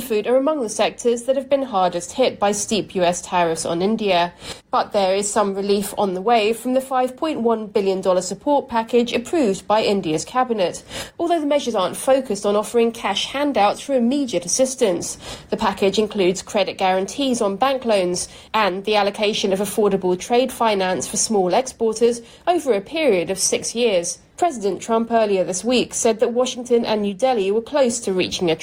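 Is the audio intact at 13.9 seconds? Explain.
Yes, the audio is intact at 13.9 seconds, with no dropout, click, distortion or other fault audible at that point.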